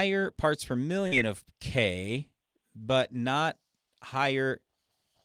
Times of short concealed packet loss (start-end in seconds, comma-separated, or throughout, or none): 1.07-1.15